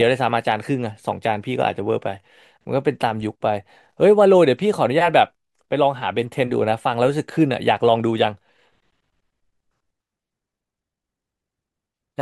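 A speech recording with a time-stretched section from 10.38 s to the end, where the pace suddenly jumps to about 1.63 times normal while pitch holds steady, sounding rushed. The likely cause is software dropping short slices to shorten the audio. On a spectrogram, harmonics keep their spacing but syllables compress.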